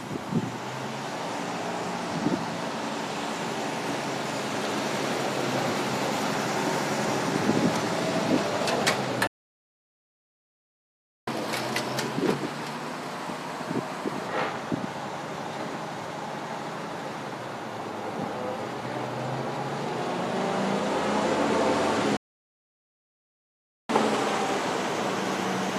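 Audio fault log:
9.27–11.27 s and 22.17–23.89 s, playback stall: the sound halts mid-flow and the output goes fully silent, for 2.0 s the first time and about 1.7 s the second, most likely because the player ran dry of buffered data or its thread was held up. Unlike a brief dropout, which loses a few milliseconds of material, these silences last for seconds and are followed immediately by the speed-up described on the next line.
11.27–14.27 s and 23.89 s to the end of the clip, catch-up at higher speed: right after each stall the sound runs fast, at 1.15 times normal speed with pitch raised about two semitones, then at 1.1 times with pitch up about a semitone and a half. The player is resampling its backlog to recover the time lost in the stall. This differs from a sample-rate mismatch because the rise appears only after a stall. The first episode returns to normal speed at 14.27 s.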